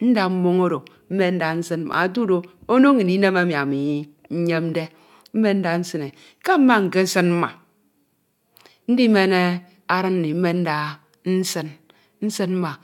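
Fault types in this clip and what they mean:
Block of digital silence: the program evidently failed to deliver one output buffer in time, and that stretch went out as zeros. The gap lasts about 5.8 ms, which fits a 256-sample buffer. Because the signal drops straight to silence and returns with no fade, and at this length, it is heard as a single tick at 1.93 s, right after "oro mmen nda nsin".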